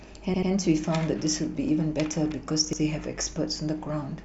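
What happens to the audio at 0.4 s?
A short stutter: from 0.34 to 0.51 s the same fragment of speech is heard three times in a row, with a hard join at each restart. This is a repeated buffer. New audio did not reach the device in time, so it replayed its last block twice more. Each repeat lasts about 85 ms, which fits a 4096-sample buffer. Essentially no speech is lost; the delay is simply inserted into the stream.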